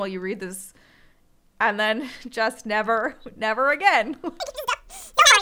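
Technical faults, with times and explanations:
4.4–5.42 s: audio read two samples at a time (double speed). From 4.4 s the speech runs twice as fast and a full octave (12 semitones) higher, because the reader consumes sample pairs as single frames, as if expecting two channels.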